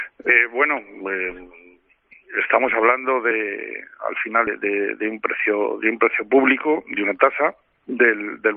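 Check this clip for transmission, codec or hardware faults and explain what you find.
Compressed frames are skipped three times, at 0.28 s, 3.30 s and 4.46 s. Whole frames of about 23.2 ms never get decoded, so the audio jumps ahead by roughly 150 ms, then about 50 ms, then roughly 200 ms. On a spectrogram it appears as a vertical discontinuity where the content abruptly shifts, and the waveform shows a discontinuous envelope.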